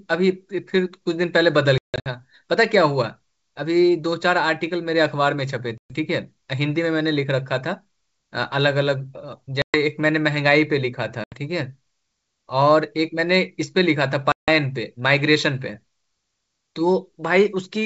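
Speech carried over what sounds like a G.722 wideband call, clear up to about 7 kHz, is broken by packet loss on an ADPCM call. At 1.78 to 2.08 s, roughly 240 ms drops out in scattered gaps, the longest 160 ms. Further holes come at 5.78 s (120 ms), 9.62 s (120 ms), 11.24 s (80 ms) and 14.32 s (160 ms). The waveform shows flat, hard-edged silent stretches and the spectrogram shows blank vertical bands. Each gap leaves the decoder's predictor and step size mismatched, so speech returns slightly distorted before settling.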